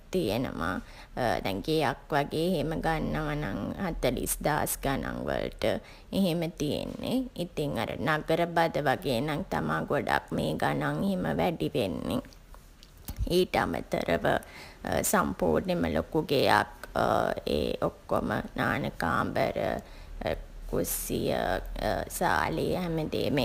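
Right through the speech there's sample clock jitter: the converter's timing wobbles by something like 7 microseconds, so each sample lands a touch early or late. Where the waveform moves fast, that timing slop turns into amplitude error, sitting roughly 25 dB under the signal. You hear it as a grainy hiss that swells on loud, bright syllables and sibilants, then drops away completely in the pauses.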